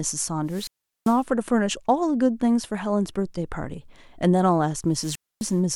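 Wireless microphone squelch dropout at 0.46 to 1.24 s and 4.92 to 5.60 s: the radio link fades, hiss rises, and the receiver's squelch mutes the speech for 0.39 s and 0.26 s before it returns.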